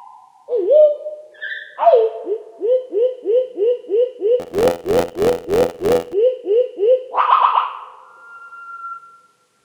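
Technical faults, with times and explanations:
4.39–6.14 s, buffer tearing: a steady robotic buzz at about 86 Hz, fitting a 512-sample buffer. Writer and reader cross, so each buffer carries a sliver of older audio.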